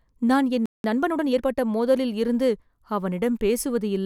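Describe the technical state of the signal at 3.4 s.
At 3.4 s the speech signal is intact, with no audible fault at that moment.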